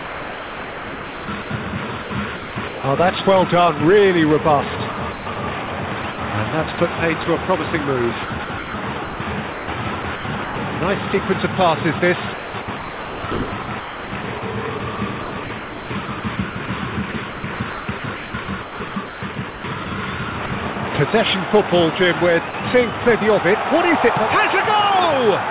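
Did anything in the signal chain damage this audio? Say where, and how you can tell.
Yes, at the call-processing stage. Sound chopped by the voice detector occurs at 0–1.5, 2.02–2.84, 4.92–6.18, 6.76–7.26, 8.24–10.56, 12.34–19.86 and 20.46–20.76 s. Real signal alternates with smooth synthetic comfort noise, worst in 12.34–19.86 s, where about 3.3 s is replaced. The sender's detector is likely toggling transmission on and off. Packet loss would produce concealment warbles or dead gaps instead.

Sound dropped by the voice detector occurs at 22.50–22.54 s. For 40 ms the sound gives way to steady noise, then resumes. It is a single isolated cut rather than repeated flicker, likely from the detector taking quiet sound for background. Everything arrives through a G.711 path band-limited to 4 kHz.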